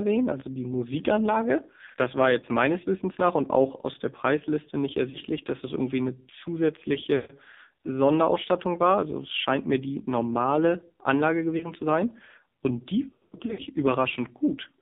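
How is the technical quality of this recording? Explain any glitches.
Quality's pretty rough: this is heavily coded phone-line speech, and a handful of short dropouts sit on top of it.

The AMR narrowband mobile codec is present throughout. It squeezes the sound into roughly 200 Hz to 3.7 kHz, and the buzzy, synthetic edge fits a low mode around 5.9 kbps.

Lost AMR speech frames come at 2.40, 5.10, 7.16, 11.58 and 13.11 s. Each time the decoder smears the last good sound and fades it out, which you hear as quick warbles. The one at 7.16 s draws out longer, and from 13.11 to 13.61 s the dropouts turn choppy and scattered.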